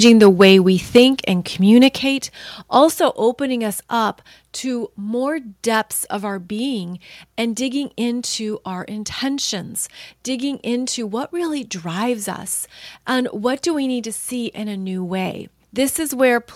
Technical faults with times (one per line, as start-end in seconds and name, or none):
0.04-0.52 microphone overload
0.96-1.04 microphone overload
0.98 microphone volume stepped down
1.77-1.87 microphone overload
1.98 microphone volume stepped down